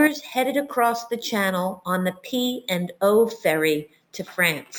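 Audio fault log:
Throughout, imaging from sample-and-hold upsampling: repeated samples, fitting a doubling from about 22 kHz, mirror the speech between 11 and 22 kHz, about 22 dB down, as metallic fizz.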